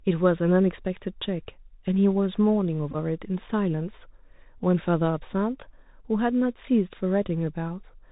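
Bluetooth CVSD headset codec, throughout the speech: the audio is coded one bit per sample as an adaptive up-or-down step, a scheme consistent with a 64 kbps link. Nothing above 4 kHz survives, s sounds turn scratchy, loud bright moments distort as they outrun the step, and a granular hiss sits underneath.

Bluetooth headset packet repeated, from 2.91 to 2.96 s: lost voice packets were filled by decoding the previous packet's bits again, scattered across about 30 ms and totalling 22.5 ms, which fits six lost packets. Runs only around 10 ms long yield a brief rough buzz near 267 Hz.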